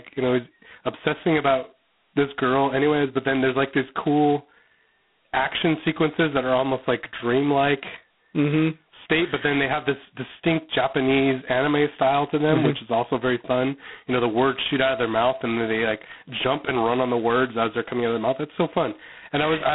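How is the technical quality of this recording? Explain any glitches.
Quality's pretty rough: the whole clip has that crunchy telephone-codec character. Throughout, it's G.726 ADPCM at a low rate, which fits 16 kbit/s: each sample is coded as a couple of bits of difference from a predicted value, so the heavy quantisation leaves a harsh, rasping hiss riding on the speech level. The band sits around 150 Hz to 3.5 kHz, with nothing above 3.9 kHz.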